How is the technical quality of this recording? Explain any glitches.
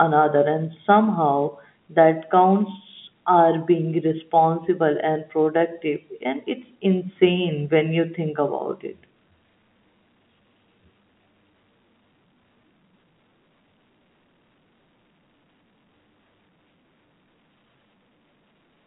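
No glitches: the speech carries the ordinary character of G.711 telephone coding, with the line band running from about 150 Hz to 3.5 kHz and nothing above 3.8 kHz, which is how a phone line is meant to sound rather than a defect.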